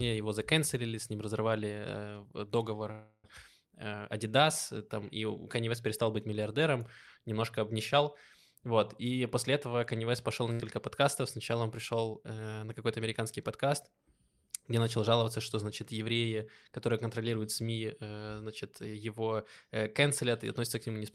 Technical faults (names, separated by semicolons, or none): call audio freeze; jitter buffer speed-up; skip ahead